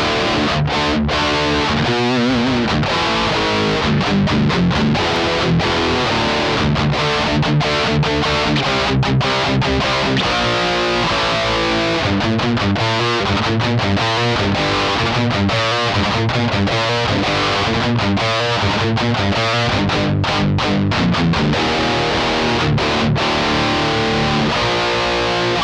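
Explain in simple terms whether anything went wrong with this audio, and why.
Twice, the recording likely suffered dropped samples: for a split second, a handful of the tiny measurements that make up digital audio went missing, roughly a tenth of a millisecond's worth each time. With that sliver gone, the sound wave jumps abruptly instead of flowing smoothly. Nothing audible is lost, but each jump comes out as a single sharp click, one at 5.16 seconds and another at 15.56 seconds.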